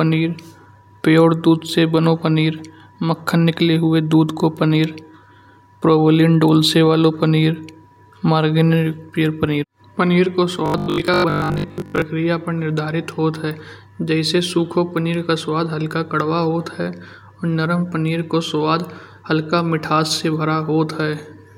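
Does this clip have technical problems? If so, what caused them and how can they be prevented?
Yes. Robotic sound from repeated short buffers runs from 10.66 to 12.04 s, between "पनीर पनीर को" and "पर निर्धारित होता". The speech turns into a rigid, metallic 50 Hz buzz. That fits a 20 ms chunk being replayed through most of the stretch, likely because new audio arrived too seldom. A larger jitter buffer and steadier audio delivery would prevent it.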